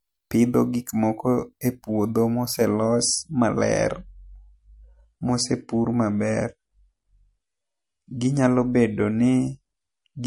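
At 2.73 s, right after "moko e puodho ma", the speech switches without any gap to an adaptive stream at a lower bitrate and stays there until the end of the clip at 10.26 s. The connection slowed, so the player fetched a leaner encoding. Nothing remains above 10.6 kHz, so the top end sounds dull, and coding artefacts become audible. The sudden change in character fits a step from MP3 at 128 kbit/s down to 40 kbit/s.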